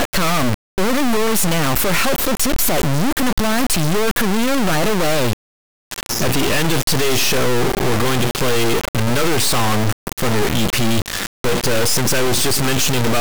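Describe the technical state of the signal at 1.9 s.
At 1.9 s the speech is buried under an integer read as float fault, present across the whole clip: 32-bit integer samples decoded as 32-bit float become tiny or huge values, so the output slams between silence and the clipping limit, a harsh square-wave buzz, not the broadband hiss of swapped byte order.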